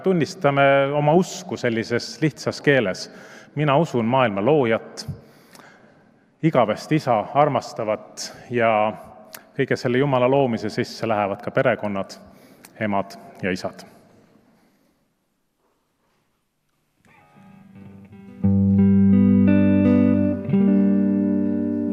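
No technical faults are audible.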